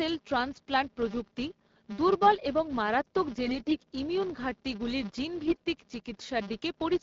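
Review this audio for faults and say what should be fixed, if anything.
A steady 200 Hz buzz runs through the whole speech clip, tracking its loudness. This is a filter restarted on every block: each block starts from zero state and leaves a small transient. Carry the filter state across block boundaries instead of resetting it.

From 3.46 to 3.84 s and again from 5.43 to 5.62 s the speech turns hoarse, scratchy and gargly while keeping its pitch and level. These are AMR bit errors: a few percent of the weakly protected bits in the AMR-WB frames arrived flipped, misplacing excitation pulses and skewing the gain and spectral values. Add stronger error protection on the link, or detect and conceal damaged frames rather than decoding them.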